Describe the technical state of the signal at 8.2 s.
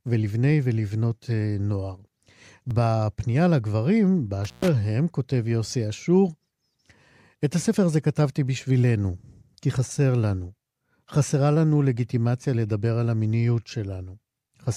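At 8.2 s the speech signal is intact, with no audible technical fault at that moment.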